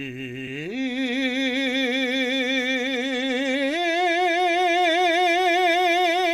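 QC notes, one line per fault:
0.47 s, compressed frames skipped. The music jumps ahead roughly 70 ms, which fits about three 20 ms frames dropped.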